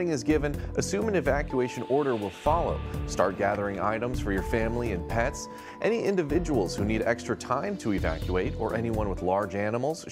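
At 0.65 s and again from 6.95 to 6.98 s, weak reception lets bit errors slip past error correction into the MP2 audio data, at a rate that sounds like a small fraction of a percent. This is DAB burbling: corrupted samples put short blips of noise in single sub-bands, and corrupted scale factors make sub-bands jump in level for up to a frame. The first burst lasts until 0.92 s. The second is brief.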